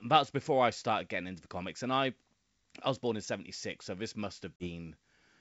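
At 4.57 s, just after "so this", packet loss on an ADPCM call cuts a hard-edged 40 ms silent gap, consistent with a few lost packets. The decoder's predictor and step size then lag the sender's, so the speech returns with slight distortion until about 4.69 s.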